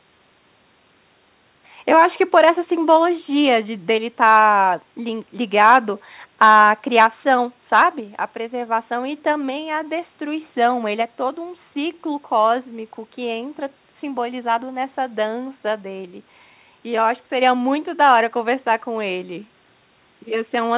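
Nothing stood out on listening to this speech, which comes through a narrowband call path with no content above about 4 kHz.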